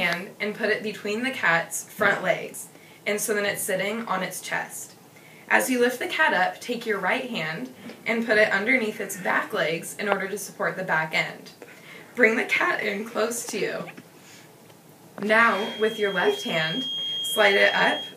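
A feedback whistle runs from 15.44 s to the end at 18.17 s: a thin, steady tone at 3.2 kHz sitting roughly 10 dB below the audio, swelling and fading slowly. The likely cause is a loudspeaker-to-microphone loop held just short of full howling feedback.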